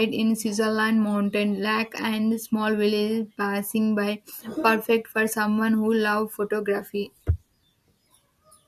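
Nothing in the speech stood out as a technical problem on listening.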